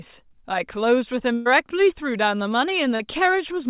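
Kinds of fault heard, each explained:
Burst of packet loss: around 1.34 to 1.47 s a run of the call dropped out, roughly 120 ms gone; the receiver stretched the last sound for about 114 ms, fading it, so you hear a held, dimming tail before the audio jumps ahead.
Short concealed packet loss: near 2.95 s about 40 ms never arrived in time, and the decoder papered over it by extending the preceding sound, then blending back in, leaving a quick smear or wobble rather than an audible hole, with everything capped near 4 kHz by the G.711 path.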